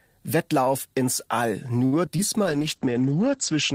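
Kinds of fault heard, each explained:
Short stall from a late packet: From 1.85 to 1.94 s the sound hangs on itself, stretched by about 68 ms with a faint buzzy hold. A packet arrived late, the jitter buffer emptied, and the receiver extended the last sound until it came, losing nothing.
Short concealed packet loss: Two brief smears, at 2.06–2.09 s and 2.17–2.20 s, each a small wobble where about 20 ms of audio never reached the decoder. The receiver covered each gap by continuing the preceding sound, then blended back into real audio.
Call bitrate drop: From 2.44 s to the end the sound turns rough and dull, losing its top end. The bandwidth estimate fell, pushing the encoder from 32 to 10 kbps, with audio bandwidth cut from 20 kHz to 8 kHz.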